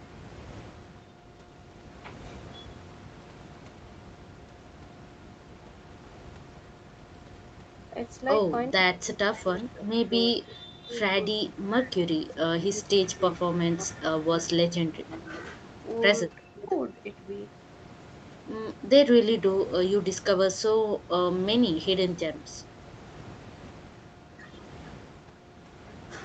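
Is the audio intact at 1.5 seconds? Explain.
Yes, the audio is intact at 1.5 seconds, with no fault at that moment.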